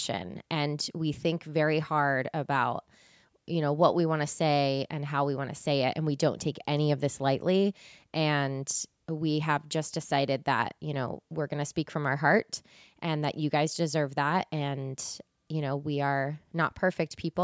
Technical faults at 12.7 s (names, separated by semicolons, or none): none